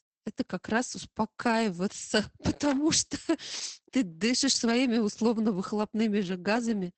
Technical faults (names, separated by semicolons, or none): Opus voice compression